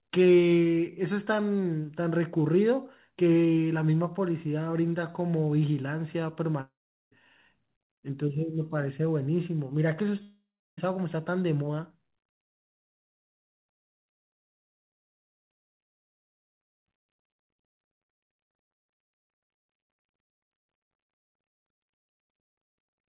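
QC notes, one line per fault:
6.61–7.12 s and 10.22–10.78 s, long network dropout: the speech smears into a fading buzz, falls silent for a few tenths of a second, then resumes with about half a second lost each time. Likely packets stopped arriving and concealment filled the gap, heard through G.711 mu-law band-limited to 4 kHz.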